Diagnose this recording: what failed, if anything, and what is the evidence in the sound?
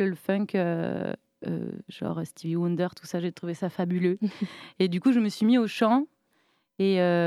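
Resampler restarted on every block, in sample-rate conversion, throughout: a 50 Hz buzz with the speech, as each 20 ms block was converted from 48 kHz to 44.1 kHz without its neighbours.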